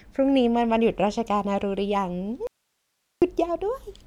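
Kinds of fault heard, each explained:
Audio dropout to a faint residue, 2.47 to 3.22 s: the speech cuts off abruptly for 0.75 s, leaving only hiss about 50 dB below it, then returns mid-flow. The likely cause is the source breaking while the path after it stayed live.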